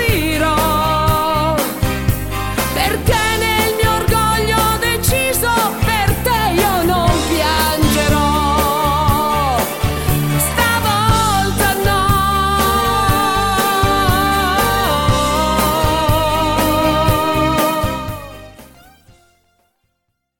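No technical faults are audible anywhere in this audio.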